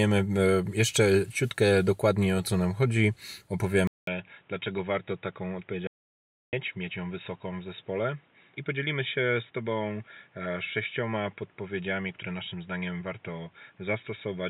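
At 3.87 s the sound likely moves to an input switched to a poorer device. A brief gap of 0.2 s marks the change. After it, nothing reaches above 3.8 kHz. The speech turns dull and boxy, drops roughly 10 dB, and carries a new noise floor to the end.

From 5.87 s to 6.53 s comes an audio dropout to silence. The input was likely lost for 0.66 s. The gap is silent with no room tone. The speech stops dead mid-flow, then resumes abruptly.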